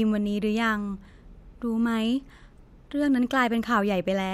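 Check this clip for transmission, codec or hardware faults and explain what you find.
Nothing wrong can be heard anywhere in the speech.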